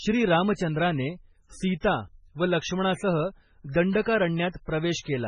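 From start to finish the speech has a watery, swirly quality, and nothing comes through above 10.2 kHz. That's likely heavy MP3 compression at a very low bitrate, around 16 kbps. The encoder chopped the treble and let weak frequency lines flicker between frames.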